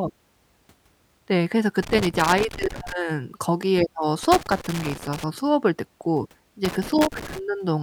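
Loose connector crackle appears at 1.8 to 2.9 s, 4.2 to 5.2 s and 6.6 to 7.4 s. A bad contact chops the speech into irregular scratchy bursts.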